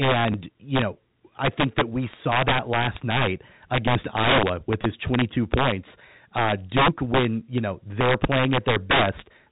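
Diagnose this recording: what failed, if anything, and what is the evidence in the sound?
Integer overflow in the sample-format conversion or gain stage runs through the whole clip. The signal is driven about 10 dB too hot. On the loudest peaks, roughly 2 percent of samples, the values wrap to the opposite sign instead of limiting, which produces harsh cracks far sharper than clipping.

Packet loss with last packet repeated occurs on the network path at 0.32 to 0.34 s and again at 4.82 to 4.84 s. In each case 20 ms of audio is replaced by a replay of the previous packet, which is consistent with two 10 ms packets. Each event sounds like a brief stutter over the telephone-band G.711 sound.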